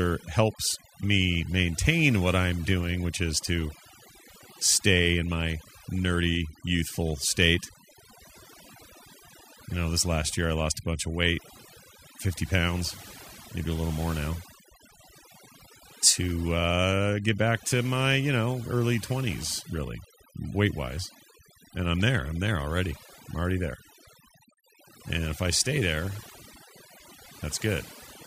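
A speech recording marred from start to finish by overdone noise removal: a noise reducer set too aggressively has pulled individual frequency bands down or off whenever they sat close to its noise estimate, taking quiet parts of the voice with them. Between phrases the background drops and breaks up into twinkling specks. Unlike a noise gate, which opens and shuts the whole signal at once, the damage here is band by band, so the residue sparkles rather than pumping.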